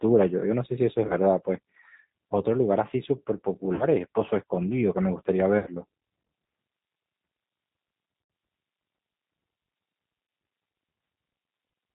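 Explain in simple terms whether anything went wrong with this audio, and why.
Something did go wrong, in two ways. Throughout the recording, the speech has passed through the G.729 codec, a phone-call compressor that rebuilds each voice from a simple model of the throat plus a few pulses. Nothing above 4 kHz survives, so it sounds muffled, and the damage is plainly audible as a rough, slightly synthetic edge. That edge separates it from an ordinary narrow phone line, which would sound dull but still natural.

There are also five short moments of VoIP packet loss concealed by the speech codec: 1.08 to 1.14 s, 3.75 to 3.85 s, 5.59 to 5.70 s, 8.24 to 8.30 s, and 10.27 to 10.29 s. In each, chunks of audio never arrived. The gaps are about 20, 40, 80, 60 and 20 ms, which points to one to four lost packets each time. Rather than going silent, the decoder guessed by stretching the last bit of voice into a fading buzz or noise. 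Because every piece builds on the one before, the voice stays weak a little past each gap. That smeared, fading patch is the sign of this fault. A plain dropout would be a clean click or a hole of silence.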